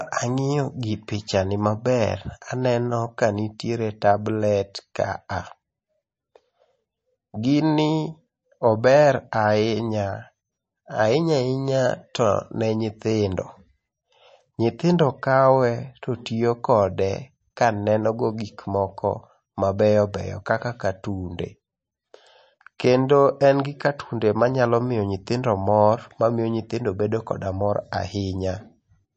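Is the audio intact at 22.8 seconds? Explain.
No. At 22.78 s a brief hiss smears in just ahead of a sharp attack. This is pre-echo: the transform codec spread quantisation noise across its block, into the 13 ms before the onset. Throughout, the speech sounds dull and watery, with nothing above 8.3 kHz, likely from MP3 compression at a low bitrate.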